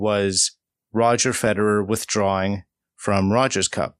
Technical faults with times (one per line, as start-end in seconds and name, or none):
1.20-1.60 DAB burbling